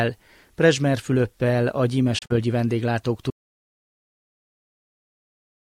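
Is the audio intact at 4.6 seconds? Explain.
No. The input was likely lost, whether through a disconnected device, a failed link or a stray mute, while recording carried on writing silence. This audio dropout to silence runs from 3.31 s to the end, so at 4.6 s there is silence with no room tone.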